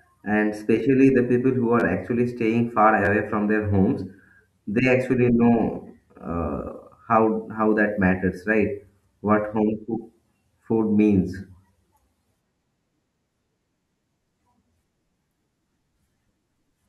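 At 1.80 to 1.82 s, between "especially the people who" and "actually staying", and again at 3.05 to 3.08 s, the speech catches in a brief buzzy stutter. Each is a repeated buffer: new audio arrived late, so a piece of about 12 ms, which fits a 512-sample buffer, played two extra times with hard joins. Unlike a dropout, no sound goes missing. The same fragment simply loops before the speech carries on.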